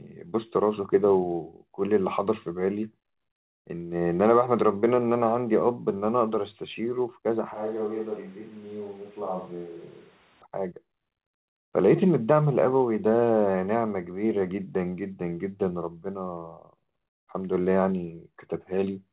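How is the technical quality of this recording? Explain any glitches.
The speech has one clear glitch. Throughout, it is band-limited to 4 kHz, the narrowband character of a call path, which points to a 64 kbps G.711 mu-law codec.

From 7.54 to 10.42 s the speech suddenly turns roomy and hollow, with thinner bass, a level drop of about 5 dB, and room noise roughly 25 dB below the speech. The likely cause is a switch to a distant microphone that picks up more reflections, followed by an abrupt switch back.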